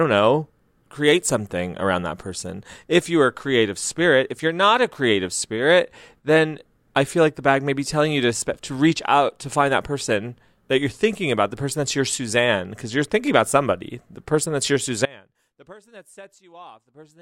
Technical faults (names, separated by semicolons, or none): audio dropout to a faint residue